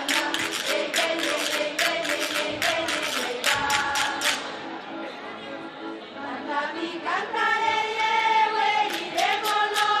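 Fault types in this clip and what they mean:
No audible technical faults are present in this audio.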